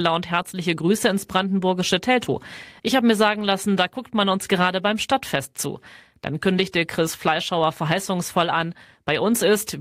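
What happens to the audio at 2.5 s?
Nothing goes wrong at 2.5 s; the speech carries on intact through that moment.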